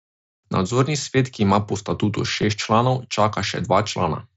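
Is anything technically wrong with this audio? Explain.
Yes, there is one brief fault: concealed Bluetooth headset packet loss at about 2.42 s. A single voice packet between headset and phone went missing, roughly 7.5 ms of audio, which fits one mSBC frame. The receiver filled the hole by repeating the best-matching stretch of the waveform just before it. The patch is nearly inaudible, with no hard silence or click. That separates it from a plain dropout, which leaves an audible gap, and from a longer run of losses, which would turn into a held buzzy tone. The mSBC wideband headset link carrying the speech adds only light codec graininess.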